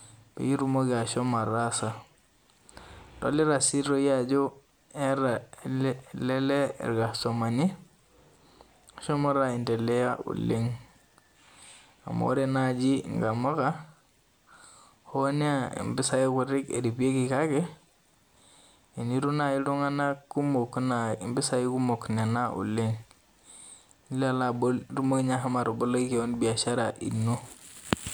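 Chunks out of order at 5.59 s: a 5.8 ms piece of speech arrived one chunk late and plays after the piece meant to follow it. Nothing is lost, but the swap leaves three hard joins, heard as a brief jumbled blip.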